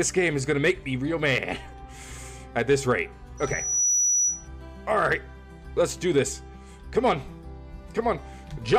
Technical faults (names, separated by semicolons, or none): loudspeaker feedback squeal